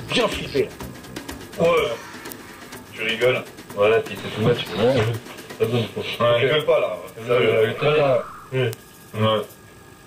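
At 2.32, 5.07 and 8.73 s, a bit error spike flips one binary digit, jumping a sample or two by a power of two, peaking near about -2, -14 and -2 dBFS. Each is an instant broadband tick, unlike a dropout click, with no gap afterward.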